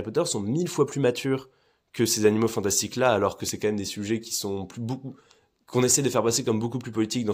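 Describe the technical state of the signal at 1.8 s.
At 1.8 s the speech signal is intact, with no audible dropout, distortion, clipping or other fault.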